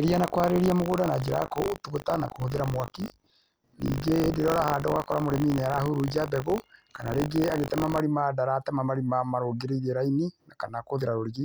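From 0.0 to 8.0 s, buffer tearing puts a robotic 50 Hz rattle on the speech. The writer and reader have slipped, so a small slice of each period replays audio some 40 ms old. On the waveform, hard joins repeat every 20 ms, and the spectrogram shows evenly spaced vertical streaks.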